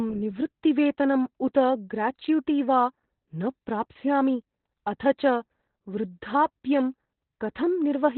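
Opus voice compression runs throughout, with heavy damage consistent with the SILK coder working narrowband at a very low rate, around 8 kbps. Nothing survives above about 4.2 kHz, so the speech sounds muffled, hoarse and faintly robotic from start to finish.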